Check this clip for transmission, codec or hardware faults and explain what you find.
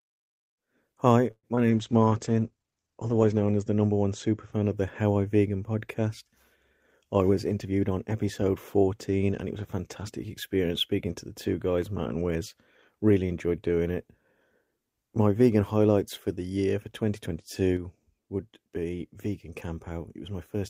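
Five separate faults turn up, all but one in the first half of the recording.

From 1.31 to 1.46 s the speech stalls as a fading sound, then about 50 ms of silence, and resumes with nothing lost. This is likely a call audio freeze: delayed packets drained the jitter buffer, inserting a 118 ms gap.

At 1.55 to 1.60 s a brief smear of about 17 ms stands in where about 40 ms of speech is missing. This is short concealed packet loss, where the receiver extended the preceding sound to cover audio that arrived too late.

From 1.72 to 4.58 s the speech turns rough and muffled, as a call bitrate drop forces coarser coding. The sound fits a fall from 32 to 10 kbps, with bandwidth narrowing from 20 kHz to 8 kHz, and it stays at its worst for 1.78 s.

Between 7.04 and 7.98 s the speech runs hurried at unchanged pitch, about 112% speed. This is a jitter buffer speed-up that trimmed around 150 ms of pitch periods to reduce built-up delay.

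At 17.77 s the speech and background both drop abruptly by about 5 dB and stay there to the end, likely a sudden gain jump applied without a ramp.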